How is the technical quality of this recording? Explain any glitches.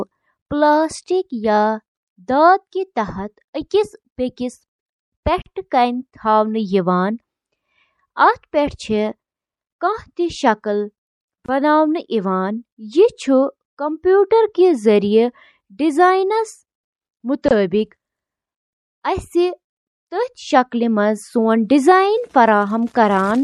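The technical quality is compromised, with audible compression damage throughout and three brief dropouts.

Throughout, the speech sounds watery and swirly, with smeared consonants and chirpy s sounds, likely MP3 compression starved of bits at a rate around 64 kbps.

Gaps at a join of encoded pieces appear at 5.42 s (about 42 ms), 11.46 s and 17.48 s (24 ms each), six seconds apart. Separately encoded pieces were joined without trimming their padding, so silences with smeared edges open before the speech resumes.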